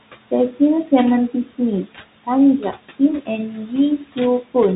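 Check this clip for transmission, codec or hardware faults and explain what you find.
Three faults are present in the speech: noise suppressor artifacts and Bluetooth CVSD headset codec damage run through the whole clip, and the noise suppressor cuts into the speech itself at three points.

Noise suppressor artifacts last from start to finish. The suppressor estimates the steady room noise, which sits about 17 dB below the speech, and pulls down the bands it judges to be noise by about 17 dB, frame by frame. As a result the background sinks in the gaps and swells back under each phrase. Ordinary room noise would stay level and smooth. Here the noise pumps in step with the speech, which identifies the processor.

The Bluetooth CVSD headset codec also affects the entire clip. Nothing reaches above 3.9 kHz, so the sound is narrowband. Sibilants turn scratchy, and louder high-frequency passages break up where the one-bit delta coder's adaptive step cannot keep pace. 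A fine granular hiss rides under the speech. The damage is plainly audible and fits a 64 kbps CVSD link. A plain low-pass filter would sound dull but clean. The grain and edge distortion are what mark this as CVSD.

Speech cut by the noise suppressor occurs at 1.3 to 1.6 s (down about 13 dB), 3.51 to 3.73 s (about 9 dB) and 3.98 to 4.18 s (about 14 dB). In each span the suppressor mistakes soft speech for noise and turns it down with the background for roughly a tenth of a second or a little more. The affected speech sounds swallowed. A dropout would go to silence or a click, while here the speech fades partially and smoothly.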